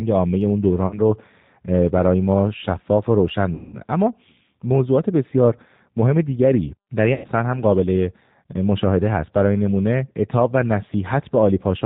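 Throughout the speech, the G.729 codec at 8 kbit/s leaves plainly audible damage. The decoder rebuilds each 10 ms frame from a vocal tract filter, a pitch predictor and a few pulses, so the voice sounds rough and slightly synthetic. On a spectrogram, energy stops sharply at 4 kHz, and harmonics look smeared and grainy rather than clean.

Packet loss concealed by the speech codec interrupts the audio three times: at 0.87 to 0.99 s, covering about 40 ms of lost audio; at 3.55 to 3.77 s, about 180 ms, the longest; and at 7.14 to 7.27 s, about 100 ms. These spans fit runs of 20 ms packets going missing. In each gap, the decoder repeats its last pitch and filter at falling gain, so the speech stretches into a buzzy tone or coloured noise that fades. Because each frame builds on the one before, the voice stays weak for a moment after real audio resumes. On a spectrogram, each gap shows a flat, repeated pattern that dims. 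On the waveform, it is a smooth, decaying envelope with no syllable shape.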